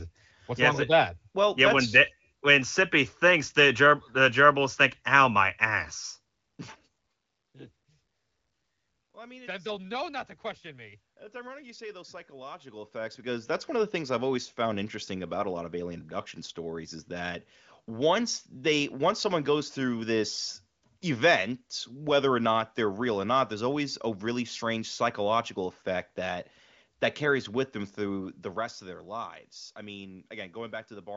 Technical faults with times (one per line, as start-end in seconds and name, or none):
none